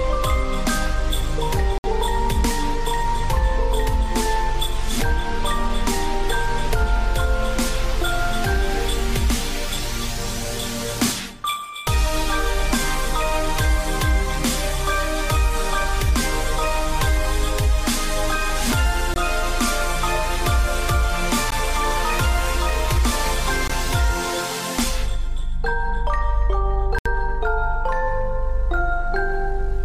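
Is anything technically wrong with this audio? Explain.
Yes, there are five blocks of digital silence, at 1.78–1.84 s, 19.14–19.16 s, 21.51 s, 23.68–23.70 s and 26.99–27.06 s. These are the output briefly going to nothing, likely because the buffer wasn't filled in time. Each one cuts the audio out and back in with no fade. The 60 and 70 ms ones are short holes, while the 15 to 20 ms ones are much shorter gaps.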